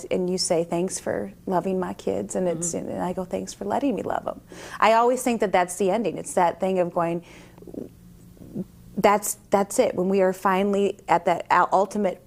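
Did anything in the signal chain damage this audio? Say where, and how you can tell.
No, nothing in the signal chain damaged this audio.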